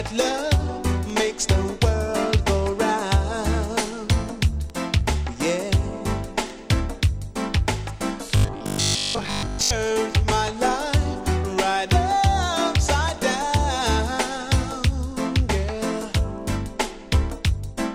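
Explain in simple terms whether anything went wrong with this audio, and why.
Between 8.37 and 9.71 s the sound turns into a stiff, metallic buzz pitched at about 50 Hz. That's robotic sound from repeated short buffers. The likely cause is fresh audio arriving too slowly, so the playback kept looping the last scrap it had, which fits a buffer around 20 ms long, while the missing material got skipped. For most of that stretch you're hearing those repeats, and their steady looping is what creates the fixed buzz.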